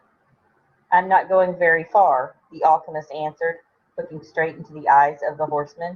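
No technical faults detected.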